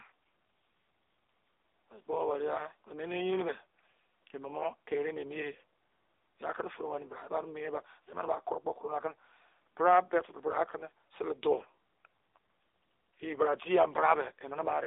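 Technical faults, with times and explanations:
Throughout, AMR narrowband mobile codec: buzzy, synthetic speech with nothing above 3.8 kHz, rebuilt by a pulse-driven vocal-tract model at a rate fitting about 8 kbps.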